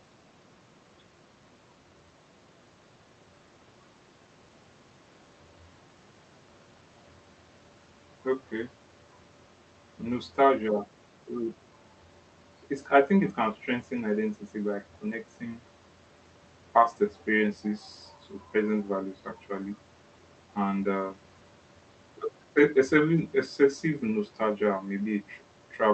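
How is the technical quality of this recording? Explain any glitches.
No glitches can be heard in this speech recording. It has the character of a call path, with the top end rolling off at about 8 kHz and the mild coding texture of a speech codec such as Opus at a moderate bitrate, around 32 kbps.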